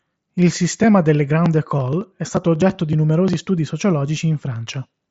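No technical faults can be heard in this speech. It comes through a Bluetooth mSBC headset codec, so nothing is heard above about 7.7 kHz, and there is a light grainy edge typical of that link.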